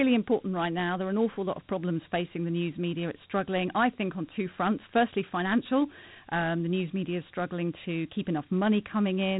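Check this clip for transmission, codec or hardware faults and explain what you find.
The speech carries Dialogic VOX ADPCM coding throughout. Coarse 4-bit adaptive steps leave gritty hiss trailing the speech. Nothing sounds above 3.9 kHz, which fits 32 kbps, 8,000-sample coding.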